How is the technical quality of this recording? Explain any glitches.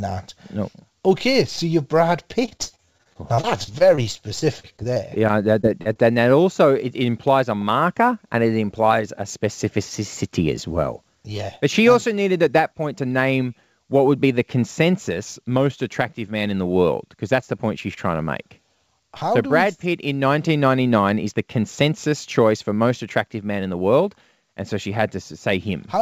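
The recording is speech with clear technical faults: a steady jitter-related roughness throughout, two bursts of repeated packet loss, and two jitter-buffer timing corrections. It passed through a G.722 call path at 64 kbps, so a spectrogram shows nothing above 8 kHz.

Sample clock jitter runs through the whole clip. The converter clock wavers by a few microseconds, so samples land slightly off time, and the error is largest where the waveform changes fastest. You hear a faint hiss, roughly 35 dB below the speech, that thickens on loud, bright sounds and disappears in pauses. On a spectrogram it appears as a haze that follows the speech energy.

Repeated packet loss (robotic sound) occurs from 2.46 to 3.99 s and again from 4.39 to 5.97 s, ending just before "and that also it". Audio keeps dropping out, and each hole is patched by extending the previous sound. The first burst has about fifteen gaps, with about a fifth of that stretch concealed. 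The second has about eight, and the longest gaps in both are near 40 ms. The speech turns choppy, with pieces missing. A spectrogram shows smeared, repeated harmonic slices with small breaks between them.

A jitter buffer slow-down runs from 3.48 to 4.73 s. The receiver rebuilt its reserve by repeating pitch periods, adding 59 ms and playing at 96% speed without changing pitch. The speech sounds slightly drawn out. The waveform shows near-identical cycles repeated back to back.

A jitter buffer speed-up occurs from 8.35 to 9.06 s, between "it implies a marker" and "a specificity as well". Excess buffered audio was trimmed by cutting out pitch periods, removing about 50 ms, so playback runs at 105% with pitch unchanged. The speech sounds hurried, and syllables look compressed on the waveform.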